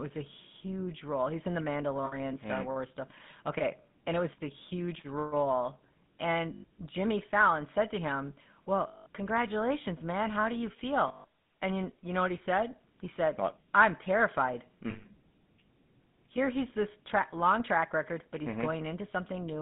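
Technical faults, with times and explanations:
Throughout, GSM full-rate codec: The speech has a plainly audible buzzy, gravelly roughness. The coder rebuilds each sound from a vocal-tract model driven by regular pulses, keeping only every third excitation sample, which fits the 13 kbps full-rate coder. Fine detail is lost, so the speech turns grainy. The band runs from about 150 Hz to 3.6 kHz, so the speech sounds thin and muffled at the top.
2.06 s, 6.54 s, 8.88 s, 11.08 s and 14.9 s, lost GSM frames: Each gap is filled with a rough, metallic ring. The decoder repeats the settings of the last good frame instead of real speech. The gaps last 60, 100, 180, 160 and 140 ms. The first comes after "in the". The third falls between "said to him" and "congratulations man". The last follows "said what I'm terrified". None lasts long enough to be cut to silence.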